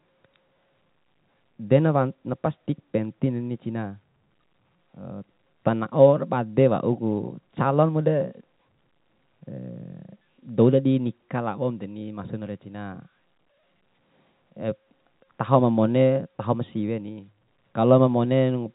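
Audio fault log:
No faults heard anywhere in this speech recording.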